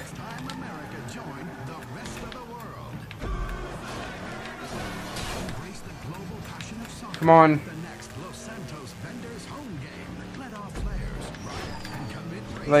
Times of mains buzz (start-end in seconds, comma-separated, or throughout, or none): 7.74-9.66